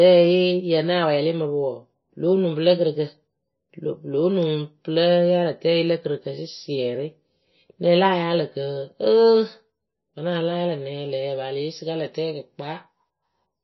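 Speech throughout, with a watery, swirling texture that is plainly audible: the top end stops dead at about 5.8 kHz, sibilants turn to chirpy, metallic fizz, and consonant attacks smear. The likely cause is heavy MP3 compression at a very low bitrate, roughly 23 kbps. Short of bits, the encoder cuts all the treble above a fixed frequency and drops weak spectral lines that flicker in and out between frames. From 10.32 s to the end at 13.64 s, the sound suddenly turns thin, bright and hissy, with sibilance jumping forward. This is pre-emphasis left on. The treble boost applied for transmission was never undone by the matching de-emphasis. The tilt fits a 50 µs FM curve, leaving 10 kHz about 11 dB hotter relative to 1 kHz.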